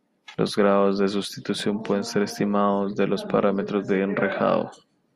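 Nothing in this speech recording calls for comment, since no technical fault turns up anywhere along the way.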